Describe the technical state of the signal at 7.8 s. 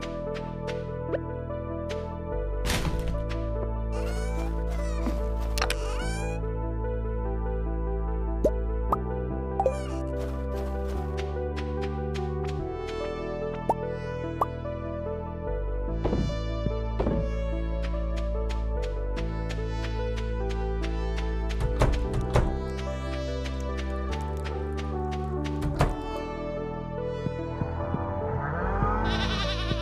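At 7.8 s the signal is intact, with no audible dropout, distortion, clipping or other technical fault.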